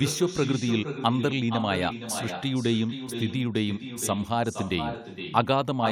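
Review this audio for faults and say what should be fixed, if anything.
Echo with no canceller runs throughout: every phrase returns about half a second later, about 8 dB quieter and thin, unlike short room reverb. Enable acoustic echo cancellation at the far end, or have that side use headphones.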